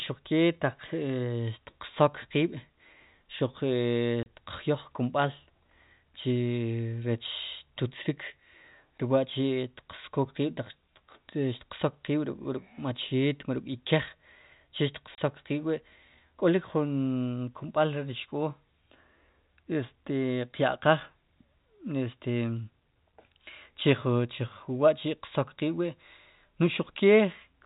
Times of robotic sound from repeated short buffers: none

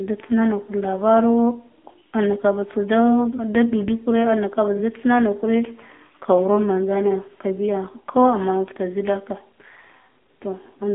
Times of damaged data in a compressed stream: none

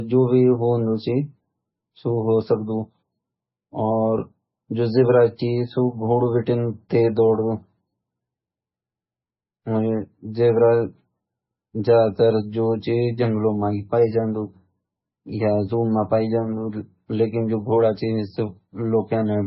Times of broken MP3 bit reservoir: none

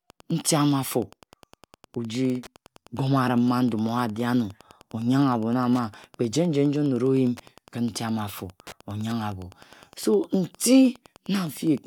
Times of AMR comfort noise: none

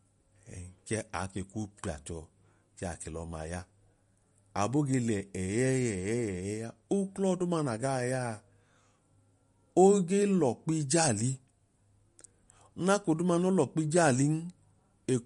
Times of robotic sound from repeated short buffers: none

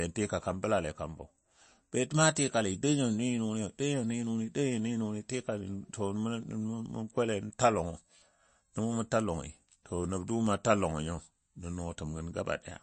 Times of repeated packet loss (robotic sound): none

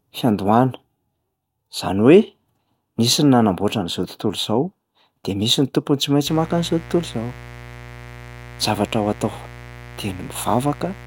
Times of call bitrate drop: none

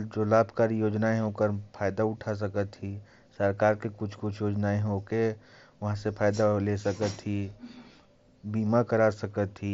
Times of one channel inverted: none

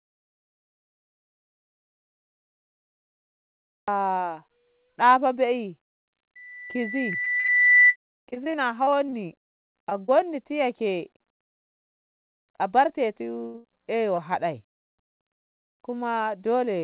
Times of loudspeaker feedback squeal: 6.35-7.96

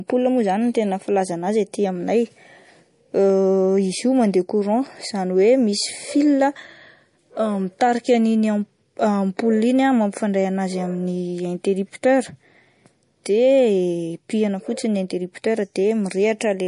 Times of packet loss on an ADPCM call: none

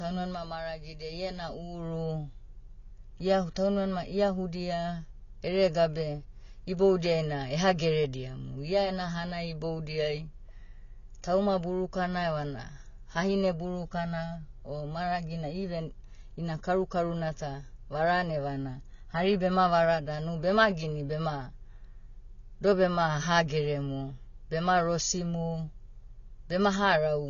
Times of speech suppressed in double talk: none

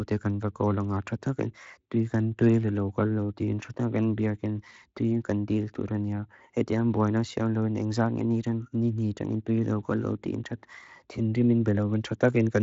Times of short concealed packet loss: none

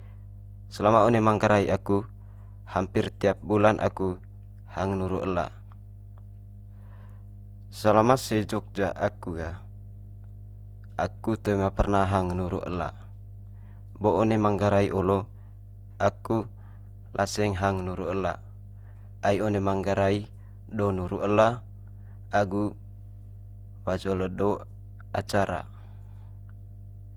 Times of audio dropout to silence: none

